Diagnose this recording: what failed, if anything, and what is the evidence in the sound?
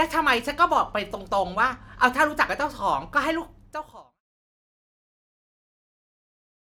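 Nothing failed in this recording.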